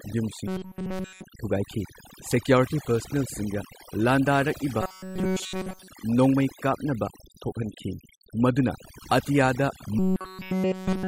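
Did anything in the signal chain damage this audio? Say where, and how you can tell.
Yes. Overdone noise removal in call processing runs throughout: a near-silent background with twinkling specks. Unlike codec damage, the artefacts sit in the gaps rather than on attacks.

Robotic sound from repeated short buffers appears from 0.48 to 1.24 s, from 4.82 to 5.88 s just after "ꯄꯥꯔꯁꯅꯦꯜꯁꯤꯡꯒ ꯂꯥꯟꯗꯥꯔꯛꯏꯕ", and from 9.99 s to the end. A steady 188 Hz metallic buzz runs through the voice, likely from the buffer stage looping roughly 5.3 ms of audio.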